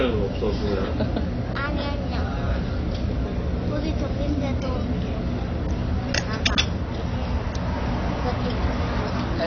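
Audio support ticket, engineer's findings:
Dull, smeared top end across the whole clip. Nothing above 6.6 kHz. Fizzy, warbling texture on sustained and hissy parts. Likely cause: AAC compression at a low bitrate, fitting about 24 kbps AAC-LC. Encoder dropped the high band and quantised coarsely. Damage plainly audible.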